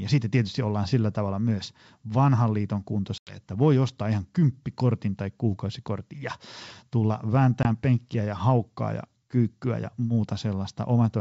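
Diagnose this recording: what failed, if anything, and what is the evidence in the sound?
Two hard-edged silent holes cut into the speech, the longer at 3.18–3.37 s between "tavalla myös vanhan liiton" and "voi ostaa ihan kymppikortin", the shorter at 7.63–7.66 s before "penkkiä ja haukkaa ja". After each gap the speech comes back briefly slightly distorted before settling. This is packet loss on an ADPCM call, a network-stage fault. About 90 ms and 20 ms of audio went missing, which fits roughly ten packets and two. The missing audio was filled with silence, and the receiving G.722 decoder, otherwise carrying clear 64 kbit/s wideband speech, lost track of the sender's adaptive predictor and step size until both re-converged.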